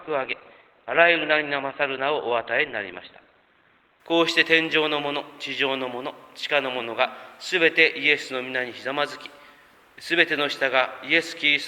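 From 0 to 4.0 s, the adaptive stream starts at a low bitrate. Nothing sounds above about 4.5 kHz. Then quality jumps suddenly, fitting a step from roughly 12 to 64 kbit/s Opus.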